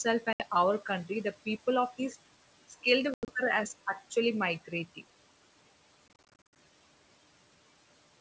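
Right at the start, around 0.33 to 0.43 s, there's packet loss on an ADPCM call: about 70 ms drops to hard silence. After each gap the decoder's predictor and step size have drifted from the sender's, so the speech comes back slightly distorted before settling. It recurs at 3.14 to 3.32 s (120 ms lost, longest hole 90 ms) and at 6.08 to 6.57 s, where about 30 packets are lost in short runs that chop the sound.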